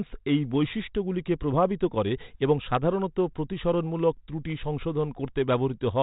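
The speech carries no technical fault, and its telephone-band sound, with nothing above 4 kHz, reflects normal G.726 ADPCM coding at 32 kbit/s, which leaves only light codec damage.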